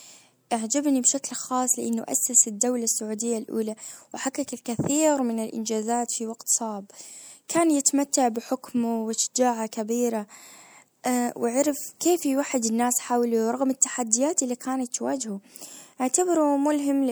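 At 4.65 s there is pre-echo: the transform codec spread quantisation noise across its block, so a short hiss of about 11 ms leads into a sharp speech onset and softens it. Unlike ordinary echo or reverb, the smear comes before the attack, not after it.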